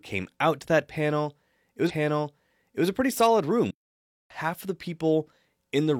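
Stream segment repeated, 1.86 to 2.84 s: the player queued the same chunk twice, so about 0.98 s of speech plays again after a small blip at the jump back. Playback stall, 3.71 to 4.30 s: the speech cuts to silence for about 0.59 s and then resumes, likely because the player ran out of buffered data.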